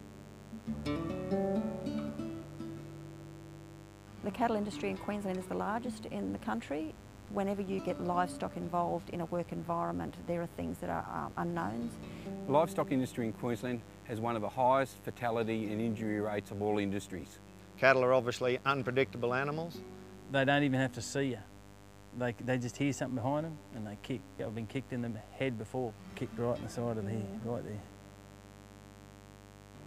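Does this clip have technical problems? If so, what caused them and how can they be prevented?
Yes. Mains buzz runs through the whole clip. Sharp switching spikes from something like a dimmer, a rectifier or an unshielded cable entered the signal path twice per cycle of the 50 Hz supply, so harmonics of 50 Hz stack up from the low end into the kilohertz range. The result is a steady, raspy buzz sitting roughly 20 dB below the wanted sound. Keeping dimmers and switching supplies off the audio circuit and using properly shielded, grounded cabling prevents it.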